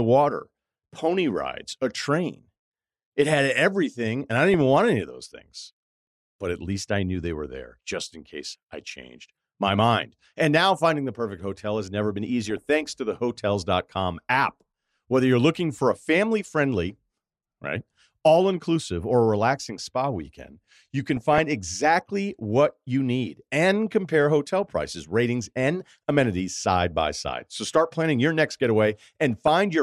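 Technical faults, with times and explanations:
4.38–4.61 s, 8.92–9.07 s, 12.42–12.70 s, 21.08–21.39 s and 29.31–29.48 s: DAB burbling. Weak reception lets bit errors slip past error correction into the MP2 audio data. Corrupted samples put short noise blips into single sub-bands, and corrupted scale factors make sub-bands jump in level for up to a frame. Over the speech, each burst lasts a few hundred milliseconds at most. The burst near 21.1 s is the densest, pointing to the heaviest errors there.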